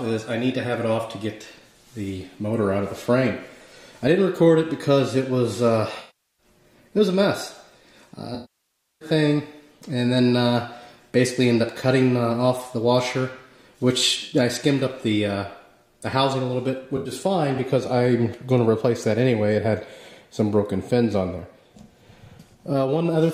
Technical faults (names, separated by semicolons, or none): AAC frame loss with concealment